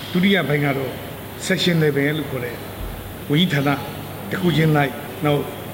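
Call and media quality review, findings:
Low bit depth with noise shaping throughout: requantised to roughly 7 bits, error pushed upward. Steady thin hiss climbing toward top of band, around 20 dB below signal.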